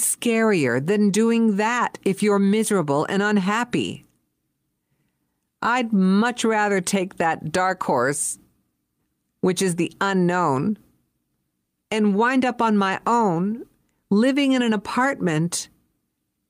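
No technical faults can be heard anywhere in the speech recording. There is nothing to time or describe.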